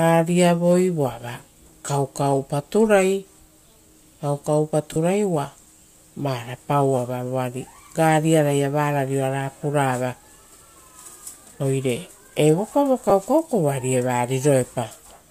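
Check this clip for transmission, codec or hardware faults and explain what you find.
Three lost LE Audio frames events occur in the speech, at 1.86–1.88 s, 4.93–4.97 s and 13.10 s. Each gap, about 20, 30 and 10 ms (consistent with whole 10 ms frames), is filled by repeating the previous spectrum with random signs, so harmonics dissolve into a brief noisy smear. A spectrogram shows narrow vertical smudges where harmonic lines break, and the waveform stays continuous but loses its periodic shape. The faint grainy texture throughout likely comes from the LC3 coding.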